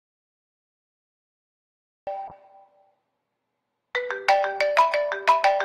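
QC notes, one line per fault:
0.00 to 2.07 s, audio dropout to silence: the clip opens already in a dead gap, pure silence with no room tone at all, then the sound snaps in mid-flow at 2.07 s. Whatever was going on before that is simply gone. A hard silence like this most likely means the input was lost, say a device dropping off the link or a stray mute, while the recorder kept writing blank samples.
2.28 s to the end, call bitrate drop: about a fifth of a second after the sound returns, it turns coarser, with a rough, watery quality. That points to the encoder being squeezed from something like 96 kbps down to around 26 kbps after the bandwidth estimate collapsed. It sits at the worst level for roughly 2.3 s and never recovers before the clip ends.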